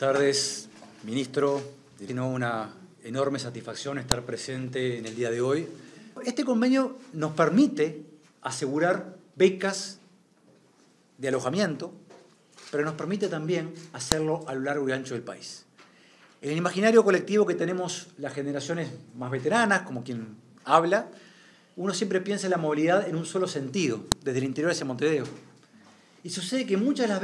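File header played as audio, heard as a sharp, loud click at 4.12 s, again at 14.12 s and at 24.12 s, repeating every 10 s. Each marks the start of a new piece of the stream, where a WAV header was left in place instead of being stripped. Those few dozen bytes of file information are read as sample values, so a brief burst of arbitrary levels snaps out regardless of what the surrounding sound is doing.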